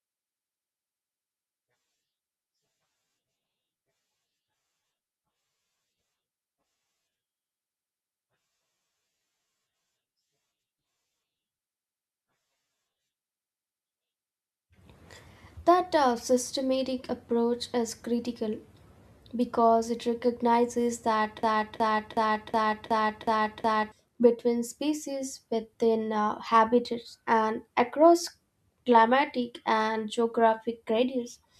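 A speech recording that, right after "because it recognizes", locks into a broken-record loop from 21.43 s to 23.92 s: a 0.37 s fragment plays seven times in a row, identical each time, until the talk resumes with "between species within uh". Whatever was said in those two and a half seconds is gone. The likely cause is a stalled player, encoder or stream that kept resending the last chunk it held.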